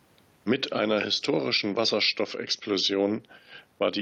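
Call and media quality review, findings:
No faults found in this recording.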